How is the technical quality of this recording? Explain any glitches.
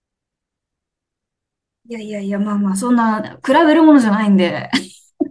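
No glitches or technical faults can be heard here.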